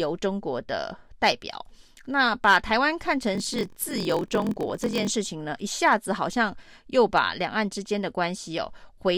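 A block size mismatch (padded) runs from 3.33 to 5.11 s. Each block arrives shorter than the next stage expects, and the remainder is filled with silence. These regular gaps create a 43.1 Hz buzz, which fits a 1024-sample read block. The speech slows to 0.938 times its normal speed while keeping its timbre.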